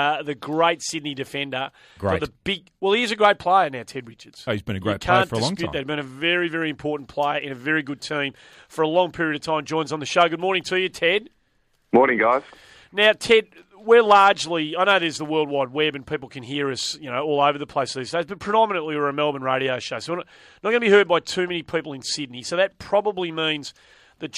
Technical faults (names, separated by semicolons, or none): none